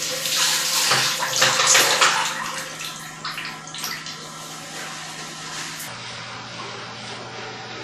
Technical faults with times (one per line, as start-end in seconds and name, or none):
0.00-7.84 WMA compression
0.00-5.88 section at the wrong speed